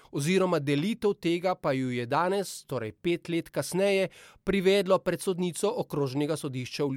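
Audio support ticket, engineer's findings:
No fault found on listening through the speech clip. No symptom heard that would point to any component in the chain.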